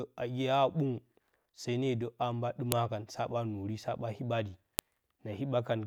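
At 2.72 s and again at 4.79 s, the speech is broken by a sharp, loud click. Each is a file header played as audio. A new WAV piece was joined on with its header still attached. Those header bytes were then played as if they were sound.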